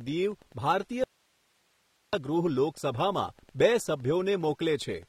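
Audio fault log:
Throughout: Wi-Fi interference. A steady tick repeats every 102.4 ms, so roughly ten a second, sitting around 35 dB under the speech. That rhythm is a nearby Wi-Fi radio's beacon getting picked up and rectified by the audio circuitry.
Throughout: AAC compression. The codec damage is plainly audible, and nothing survives above 16.5 kHz. This fits low-bitrate AAC-LC, around 32 kbps, where the encoder drops the top end and coarsely quantises what remains. That is the likely cause of the smeared texture.
1.04 to 2.13 s: audio dropout to a faint residue. The speech cuts out abruptly for about 1.09 s and comes straight back. Only hiss remains, roughly 40 dB below the speech. The signal was likely lost upstream while the rest of the path stayed live and kept passing its own noise.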